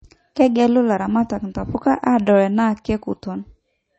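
Across the whole speech recording the sound is dull and watery, with nothing at all above about 8.3 kHz and a swirling, metallic shimmer on the s sounds. The likely cause is heavy MP3 compression, probably at a low bitrate around 32 kbps. Short of bits, the encoder discards the treble above a fixed cut-off and drops weak frequency components that flicker in and out between frames, which produces that warbling texture and smears each attack.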